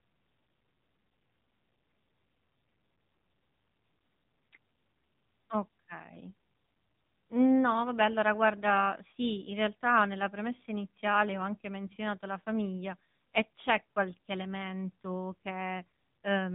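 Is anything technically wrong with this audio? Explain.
Yes. Throughout, the speech carries the AMR narrowband mobile codec: nothing above 3.8 kHz survives, and the buzzy, synthetic voicing points to a low bitrate near 8 kbps. Unlike a plain band-limiting filter, each 20 ms frame is rebuilt from a vocal-tract model and sparse pulses, which adds that artificial, reedy texture.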